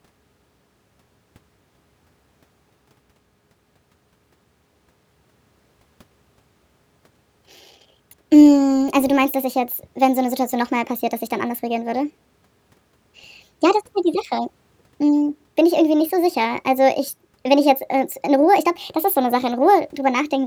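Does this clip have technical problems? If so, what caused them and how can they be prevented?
Yes. The speech plays with a wrong sample rate throughout. Everything runs about 1.38 times too fast, and pitch rises by about 5.55 semitones. Voices sound high, thin and hurried. Speed and pitch shift together by the same ratio. That points to samples captured at one rate and played at a higher one with no conversion. This fits audio recorded at 32 kHz and played back at 44.1 kHz. To prevent it, resample to the playback device's rate or tag the file with its true rate.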